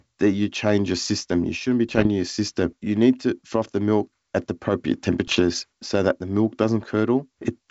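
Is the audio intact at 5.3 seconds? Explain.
No. From 5.27 to 5.43 s, bit errors on the ADPCM link upset the decoder's step size and predictor, giving pops and rough bursts with brief level jumps.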